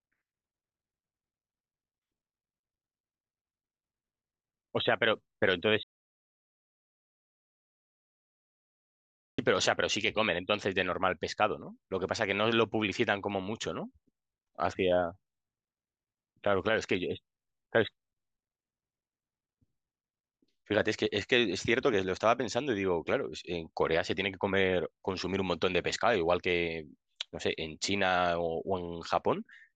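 The input was likely lost from 5.83 to 9.38 s, an audio dropout to silence: speech cuts off into 3.55 s of total silence.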